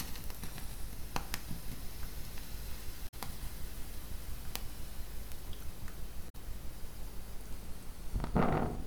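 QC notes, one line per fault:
0.40–0.90 s, drift correction step: a clock-matching stage likely slowed playback by 5.8% to refill its buffer, dropping pitch about 103 cents, a semitone, before snapping back.
3.05–3.14 s, damaged data in a compressed stream: corrupt frames made the decoder lose sync and hunt for the next header, leaving a brief glitch.
6.26–6.35 s, damaged data in a compressed stream: another corrupt stretch threw the decoder off its frame boundaries, producing a short glitch until it resynchronised.
7.56–8.76 s, drift correction step: the rate matcher likely again cut playback speed by 5.8%, so the sound sags about a semitone flat for over a second, then recovers.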